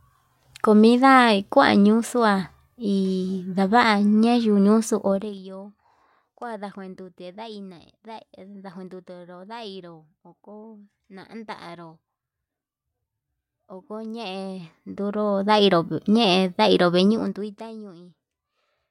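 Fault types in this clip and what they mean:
Zipper noise: a fast ticking rides on the speech during three level moves, as gain jumps in 1 to 2 dB steps, roughly twenty per second, without smoothing.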